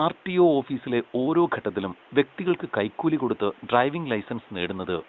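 Nothing goes wrong anywhere in this bit of speech, with the room's background noise sitting well down, about 29 dB under the talker, and the HD Voice coding sounding like one of the upper AMR-WB rates, around 23.85 kbit/s.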